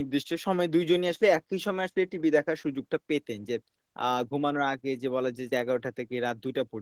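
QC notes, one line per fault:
throughout, Opus voice compression: a low bitrate, fitting about 16 kbps in hybrid mode, codes the speech excitation coarsely, so the speech sounds plainly hoarse and slightly robotic.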